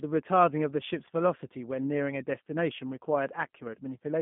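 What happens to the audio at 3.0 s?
G.729 codec damage is present at 3.0 s, as it is across the whole clip. The speech is rebuilt from a vocal tract filter, a pitch predictor and a few pulses in each 10 ms frame rather than sent as a waveform, and the rough, slightly synthetic texture fits an 8 kbit/s codec. The band is confined to roughly 150 Hz to 3.5 kHz, so the speech sounds narrow and telephone-like, with no air above it.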